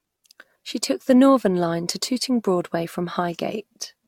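From start to end the speech has a swirly, smeared, hollow quality, with consonant attacks blurred and noise built up beneath the voice. This is likely generation loss: the audio seems to have been encoded and decoded about five times, each pass re-quantising on a shifted frame grid so errors pile up. The character fits an AAC-LC chain around 96 kbit/s. A spectrogram shows nothing above 17 kHz, flickering holes through the upper bands, and smeared onsets.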